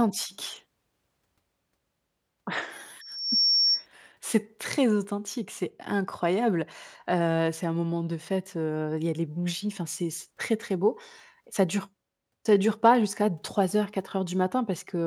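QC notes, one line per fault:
3.01–3.87 s, loudspeaker feedback squeal: a single 5.5 kHz tone swells out of the speech over roughly 0.4 s and ends up about 5 dB louder than the talker before it stops. The microphone is hearing its own loudspeaker, and at that one frequency the loop gain tops unity, so the tone feeds itself. The gradual swell separates it from a steady whistle or interference tone, which would arrive at full level at once.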